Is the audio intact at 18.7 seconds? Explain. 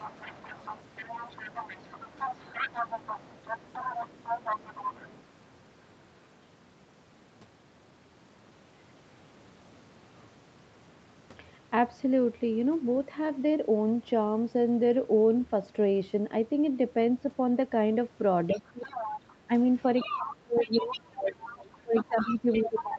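No. From 18.5 to 18.94 s the talker's voice dips by roughly 20 dB, likely speech suppressed in double talk, with the canceller ducking both voices together rather than the line dropping out. Over 18.5 to 19.19 s a second voice, about 10 dB below the talker, likely leaks through from the far side's loudspeaker as residual echo, not background crosstalk.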